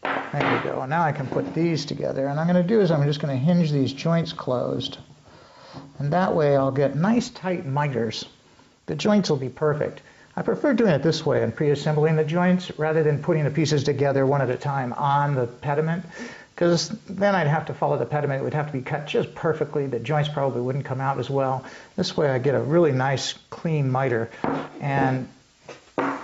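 Gain pumping runs through the whole clip. The level ducks under each loud sound and swells back in the gaps, swinging around 5 dB. The sound feels squashed. It is likely input gain set too high, with a fast limiter pulling it down. Nothing reaches above 8 kHz, as the call path allows.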